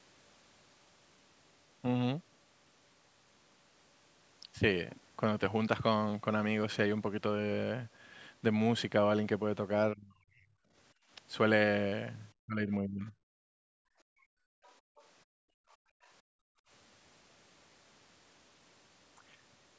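At 9.94 to 10.54 s, and again at 12.4 to 13.13 s, the speech sinks sharply, by roughly 35 and 40 dB at its deepest, for about 0.7 s each time. This is speech suppressed in double talk, likely from the echo canceller hearing both ends at once and turning everything down. What sets it apart from simple gating is that the talker's own voice is hit, not just the room between phrases.

Background gated by the echo canceller appears at 10.94 to 11.1 s, a brief dip of about 19 dB, then at 13.39 to 16.69 s as a long stretch of about 3 seconds, pulled down by about 34 dB at worst. Here it is the room tone that drops away and then returns, the sign of a canceller clamping the microphone while the loudspeaker plays. The dip is in the background rather than in active speech.

Inside that long gated stretch, at 14.64 to 15.05 s and 15.71 to 16.08 s, faint scraps of the other side's voice leaking through can be heard, roughly 35 dB below the talker, likely residue of loudspeaker sound the canceller failed to remove. 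Unlike the suppression events, this adds a second voice instead of removing level. The band stops at 8 kHz, consistent with the call's microphone path.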